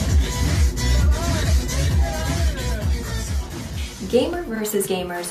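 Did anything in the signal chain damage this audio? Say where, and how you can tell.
Yes. Compressed frames skipped at 4.86 to 4.88 s, at the codec or storage stage. The audio jumps forward by about 50 ms, a couple of frames that fit a 23.2 ms frame length. Those frames were missing or refused by the decoder as damaged.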